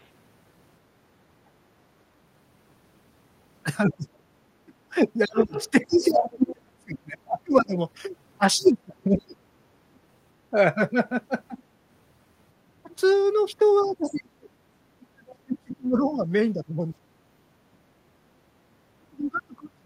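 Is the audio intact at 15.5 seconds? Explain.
No. At 15.5 s two faults overlap. The other side's voice leaking through runs from 13.8 to 15.76 s: a faint second voice, roughly 30 dB below the main speech, sits underneath it. This is likely loudspeaker playback reaching the microphone that the echo canceller failed to subtract fully, so a residue of the far end survives in the sent signal.

Speech suppressed in double talk starts at 13.81 s and lasts to the end of the clip, at about 19.86 s. The main voice sinks, at its deepest dropping by something like 35 dB, so parts of it nearly vanish. The likely cause is the echo canceller mistaking the overlapping talk for echo and attenuating the near-end speech along with it.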